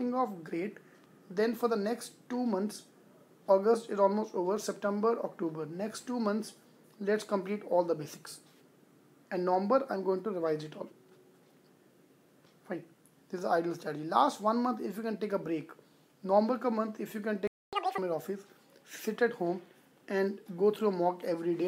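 At 17.47 s the sound just drops out, and you get a playback stall of about a quarter of a second, roughly 254 ms of silence before anything comes back at 17.73 s. It's an abrupt hole mid-flow rather than a fade, which is the signature of the player having nothing to send to the output. Most likely it ran dry on buffered data or its audio thread got held up for that stretch.

Right after that, from 17.73 to 17.98 s, there's a catch-up at higher speed. For that quarter second the audio runs at double speed, and because it's being resampled rather than time-stretched, the pitch jumps with it, up by something close to ten semitones, so it comes across as a brief chipmunky squeak. That's the player burning through its backlog to win back the time it lost, then snapping back to normal rate at 17.98 s.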